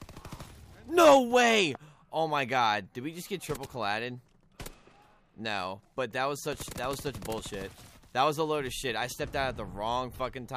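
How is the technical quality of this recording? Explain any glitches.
The recording has one clear glitch, a loud pop near the start.

Between 1.51 and 1.77 s there is a loud pop: two sharp thumps in quick succession, peaking roughly 10 dB above the surrounding sound, while the audio continues underneath. This is likely an electrical transient, such as a plug, switch or static discharge, putting a sudden voltage step into the signal path. On a waveform it shows as two tall spikes standing well above the envelope. On a spectrogram it appears as two thin vertical stripes spanning the full frequency range.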